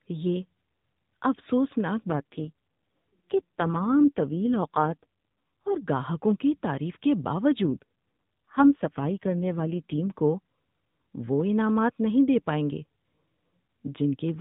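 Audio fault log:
2.10–5.79 s and 7.62–10.20 s, AMR rate drop. The narrowband sound turns buzzy and synthetic, with no gap and no band change. The first ends just before "گاہکوں کی تعریف کے", and the second starts just after. This fits a fall from 12.2 to 4.75 kbps, leaving fewer excitation pulses per frame.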